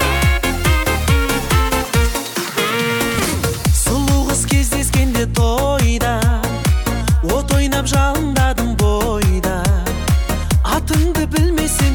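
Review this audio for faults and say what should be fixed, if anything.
From 0.73 s to 5.22 s the sound turns grainy, with distortion that tracks the signal and sits only about 20 dB below it. The likely cause is low bit depth without dither: rounding to about 5 bits ties the error to the waveform. Keep a higher word length and apply dither before any reduction in bit depth.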